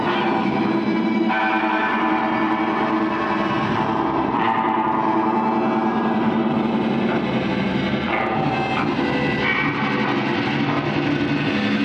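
From 9.38 s to 11.39 s the sound goes through a Bluetooth SBC bit pool drop: the link seems to have congested, and the encoder cut its bit allowance to keep the stream alive. The top sub-bands lose their bits, so the treble dulls, and the remaining bands are quantised coarsely enough to add a gritty noise. The depth of the loss fits a bit pool falling from 28 to 12, around 96 kbps. Unlike a steady low-pass filter, the grit and dullness last just two seconds and then lift.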